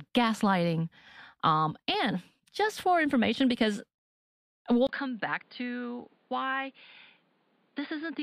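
Speech recording. From 4.87 s to the end, after a 20 ms gap, content stops at 5 kHz, level falls roughly 10 dB and new noise appears, likely the input switched to a poorer device.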